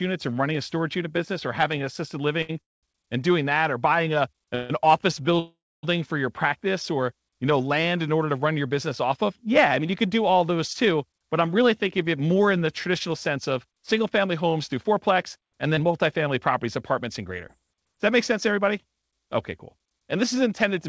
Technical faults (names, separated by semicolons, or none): short stall from a late packet; call audio freeze; jitter buffer speed-up; scattered short gaps